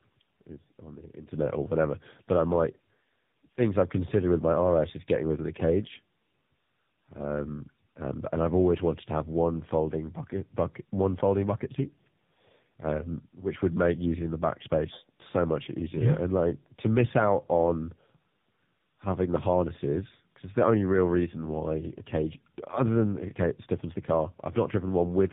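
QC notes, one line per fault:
Throughout: tandem speech coding. The speech sounds rough, muffled and warbly, with nothing above about 3.8 kHz. The roughness is heavier than one narrowband codec would leave. It fits a call that crossed networks and was decoded and re-encoded at each border. The sound suggests a chain of GSM full rate, then G.711 mu-law, then AMR-NB at around 7.95 kbit/s. Two lossy speech coders ran in a row, so the second coded the first one's already degraded output.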